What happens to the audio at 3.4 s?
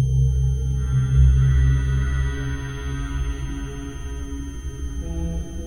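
At 3.4 s a switching supply whistle sits under the sound, as it does throughout. It is a thin, high tone near 3.14 to 3.17 kHz, roughly 30 dB below the audio. A switching power supply running in an audible burst mode or beating with another one causes it.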